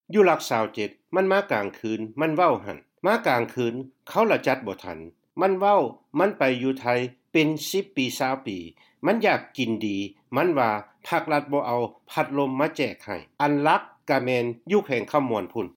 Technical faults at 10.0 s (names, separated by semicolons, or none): none